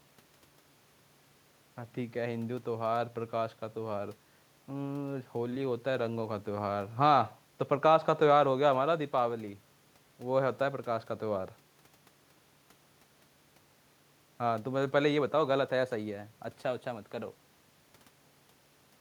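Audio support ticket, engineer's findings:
No audible faults found in this speech recording.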